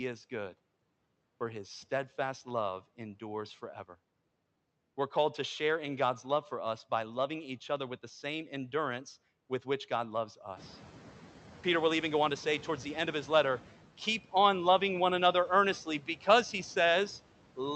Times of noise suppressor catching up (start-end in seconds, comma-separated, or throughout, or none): 10.56-11.40